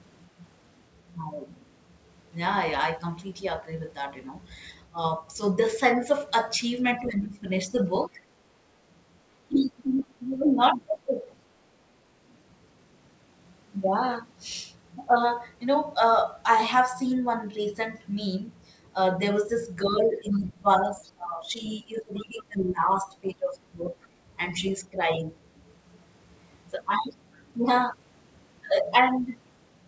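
Speech suppressed in double talk first appears at 4.93 s as a brief dip of a few decibels, lasting only tens of milliseconds. It returns between 7.0 and 8.18 s, where the voice sinks by about 10 dB in pieces totalling around half a second. The likely cause is an echo canceller that, with both sides talking at once, could not tell the local talker from loudspeaker echo and turned everything down together.

From 9.48 to 11.1 s the suppression deepens to about 20 dB, again chopping away roughly half a second of the voice. Inside that stretch, the other side's voice leaking through appears at 10.0 s as a faint scrap, far below the talker. It is likely the residue of loudspeaker sound that the canceller failed to remove from the microphone.

The longest episode runs from 19.84 to 25.21 s. Here the talker's voice repeatedly drops by up to about 20 dB, losing around three seconds in total. Two spans of leakage overlap it, from 19.95 to 21.12 s and from 22.15 to 24.08 s. 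Both sit far below the talker.

At 24.24 s the background is gated by the echo canceller. The room sound ducks by about 7 dB for roughly 50 ms while the canceller clamps the microphone against loudspeaker output, then springs back as it releases.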